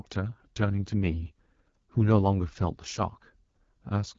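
From start to finish the speech carries AMR wideband (HD Voice) codec damage, plainly audible as a rough, raspy texture that fits one of the low rates, around 8.85 kbit/s. On a spectrogram, harmonics blur, the 6.4 to 7 kHz band turns to featureless noise, and nothing appears above 7 kHz.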